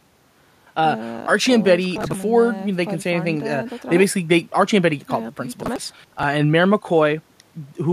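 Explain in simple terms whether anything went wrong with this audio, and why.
Two stretches of processor overload crackle break up this speech, from about 1.96 to 2.23 s and again from 5.63 to 6.23 s. The computer couldn't finish its small chunks of audio on time, which fits chunks of roughly 10 ms each, so about 20 and then about 40 of them were simply skipped. Each skip leaves a tiny, hard-edged gap. Strung together, those gaps turn into a gritty crackle over the voice, and it stops once the processor catches up.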